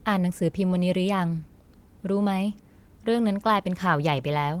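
No technical faults can be heard in this speech clip. The Opus voice compression keeps the full band, with content reaching up to about 20.2 kHz, and its light coding traces fit the hybrid mode at around 20 kbps.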